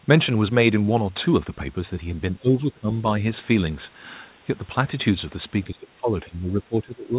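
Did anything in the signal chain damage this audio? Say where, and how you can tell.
Yes, at the call-processing stage. From 2.37 to 2.9 s the speech sinks by about 20 dB, and from 5.64 s to the end of the clip it drops by about 15 dB. This is likely speech suppressed in double talk: with both sides talking at once, the echo canceller could not separate the near talker from the loudspeaker echo and turned both down. On a waveform the envelope visibly caves in over those spans. On a spectrogram the harmonics thin and fade below the 4 kHz ceiling of the G.711 call path.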